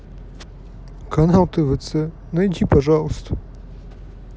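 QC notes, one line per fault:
No faults found in this speech clip. Nothing to log.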